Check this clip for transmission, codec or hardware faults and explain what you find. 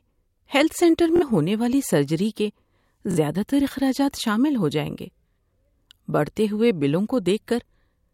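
Two Bluetooth stutters: 1.16–1.23 s, after "ہیلتھ سینٹر", and 3.11–3.18 s, before "زیادہ تر اخراجات شامل". Roughly 46 ms drops out each time, which fits two lost packets. The receiver replays its last slice as a quick buzz, then jumps ahead.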